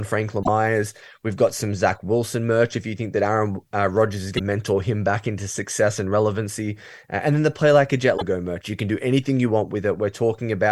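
Three short bursts of damaged data in the compressed stream break up the speech, at 0.41 to 0.49 s, 4.35 to 4.41 s and 8.14 to 8.22 s. Each is under a tenth of a second and comes through as a brief glitch. Some bytes in the encoded stream got mangled there, so the decoder misreads those frames, loses its place and has to hunt for the next valid frame header before it can carry on.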